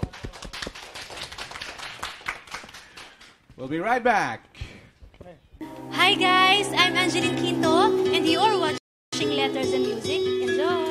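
At 8.78 s a rebuffering stall cuts the sound to silence until 9.13 s; the player's buffer ran dry, then playback resumes intact, adding 0.35 s.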